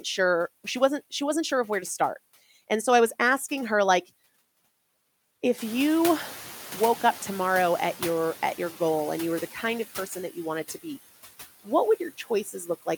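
From start to finish, the background noise dips in the gaps between phrases and swells back up underneath the speech, so the noise floor seems to breathe with the talker. These are noise suppressor artifacts: a suppressor works through the signal frame by frame, pulling down every frequency band it judges to be steady noise. Here it removes about 14 dB.

At around five and a half seconds, the room noise jumps by about 14 dB and settles about 16 dB below the speech. From 5.58 s to 8.15 s, that louder noise comes through with less reduction at first and then gradually sinks. This is the noise suppressor catching up. Its noise estimate was built on the quieter background, so it initially cuts only about 6 dB and needs roughly 2.57 s to adapt to the new level.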